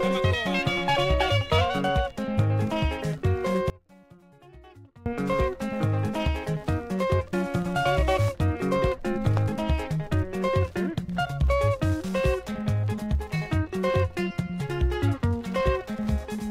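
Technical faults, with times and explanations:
3.70 to 5.06 s, one channel inverted: for that stretch the sound collapses, dropping by about 25 dB. The likely cause is one side of the stereo pair flipping polarity while the two get summed to mono. Everything the channels share cancels, so centred material and the low end all but disappear, and what you're left with is just the faint difference between left and right.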